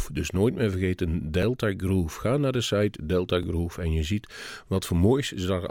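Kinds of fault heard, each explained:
Overlapping chunks: the speech was handled in pieces about 2 s long, and each new piece begins a little before the previous one finished, so roughly 6.5 ms of audio gets played twice at the seam. You can catch it as a quick tick or tiny stutter at 1.43 s and again at 3.43 s, spaced exactly one chunk apart, which is the giveaway that it's a chunk boundary.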